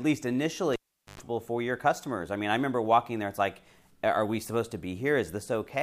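At 0.73 s the speech cuts out with a pop as a live cable is pulled and plugged in: about 0.43 s of near silence, then a 0.11 s burst of 50 Hz mains buzz while only the tip connects, and a second pop at 1.21 s. The buzz and paired pops separate it from a plain dropout.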